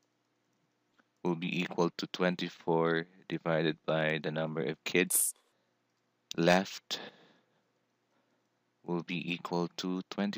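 Around 5.10 s to 5.52 s the audio gets read two samples at a time, so it races at double speed (2x) and jumps an octave up. The reader is treating sample pairs as single frames.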